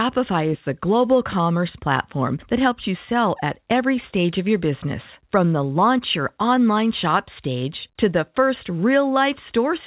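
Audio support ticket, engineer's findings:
No faults found; call audio limited to 4 kHz.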